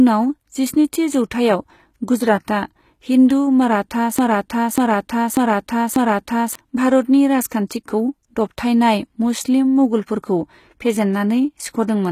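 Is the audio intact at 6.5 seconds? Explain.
No. At 6.5 seconds you're still inside a broken-record loop that runs from about 4.19 to 6.55 s. A slice of roughly 0.59 s plays four times back to back, identically, so whatever should have come in that stretch never arrives. That's most likely a stall in the player, encoder or stream, which just kept resending the last fragment it had buffered until things caught up again.

The same moment also carries the HE-AAC compression that runs through the whole clip, and it's plainly audible. The treble isn't the real thing. It's been rebuilt from lower bands copied upward, so the top end sounds glassy and out of step with the body of the speech, with s sounds going gritty or lispy. Nothing comes through above about 14.9 kHz, and the damage points to a low-bitrate encode, likely somewhere near 20 kbps.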